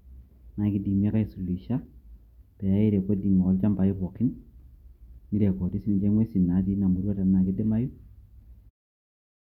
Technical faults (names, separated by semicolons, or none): none